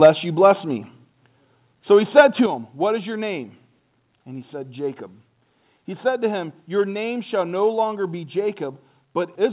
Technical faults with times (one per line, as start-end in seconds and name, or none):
0.03-0.08 microphone overload
0.06 microphone volume stepped down
0.44-0.46 microphone overload
1.05 microphone volume stepped down
2.17-2.21 microphone overload
2.46 microphone volume stepped down